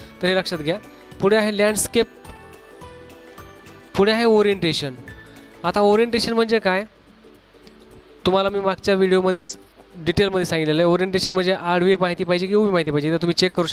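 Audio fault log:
9.31–9.58 s, long network dropout: sound smears into a fading buzz for about 180 ms, then resumes with that piece gone, likely from packets never arriving.
9.49–9.51 s, lost packet rebuilt from error correction: a 20 ms patch sounds rougher and noisier, decoded from the low-bitrate copy carried in the next packet.
11.24–13.56 s, repeated packet loss (robotic sound): four holes totalling 200 ms, longest 100 ms, each patched by stretching the last sound, giving a choppy feel.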